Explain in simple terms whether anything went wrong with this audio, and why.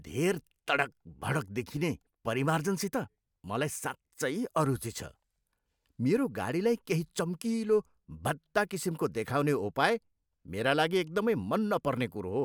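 Nothing went wrong; no technical faults can be heard here.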